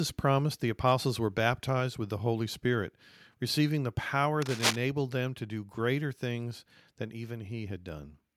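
At 4.42 s a burst of cable scratch noise starts, lasting until 4.76 s. Dense, uneven scratching rustles over the speech at roughly the same loudness. A worn cable or connector being moved is the likely cause, its contact resistance fluctuating rapidly.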